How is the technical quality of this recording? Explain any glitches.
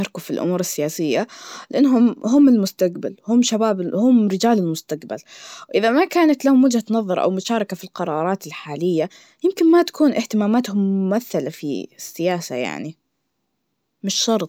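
The technical quality of this recording is sound, with no glitches to explain.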